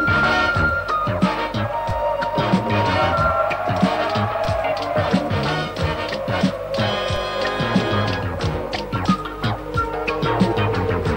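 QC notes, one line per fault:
1.90 s, 4.45 s, 7.16 s: DC step. Each time the waveform's zero line jumps by an offset of about -18 dBFS, then drains away through a 20 Hz high-pass. Every jump lands as a single low thump or click, with the sound carrying on unchanged underneath.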